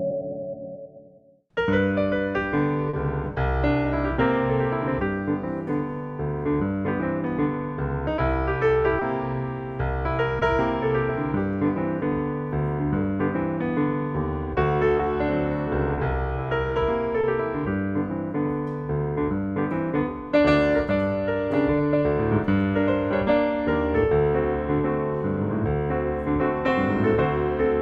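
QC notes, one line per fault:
2.89, 8.99, 10.39, 14.97, 15.95, 17.21 s: short concealed packet loss. Audio arrived too late to decode: 40 ms at 2.89 s, 20 ms elsewhere. The receiver extrapolated the preceding sound, pitched or noise-like, then crossfaded back, producing brief smears where short transients may drop out.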